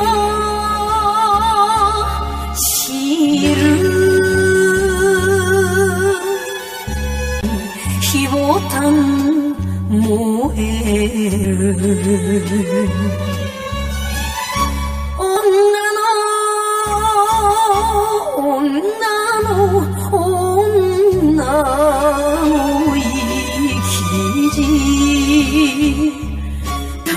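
Channel delay (comb filtering) runs throughout: one channel lags roughly 10 ms, so summing to mono notches regular frequencies from around 50 Hz, sounding hollow.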